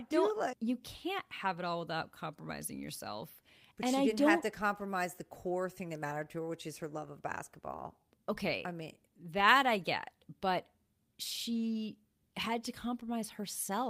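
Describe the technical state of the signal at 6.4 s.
At 6.4 s the speech signal is intact, with no audible technical fault at that moment.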